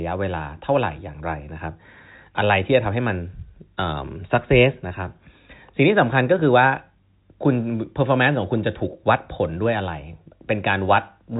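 Nothing stood out on listening to this speech, which is carried over ordinary G.711 telephone coding with its usual cut-off at about 3.8 kHz.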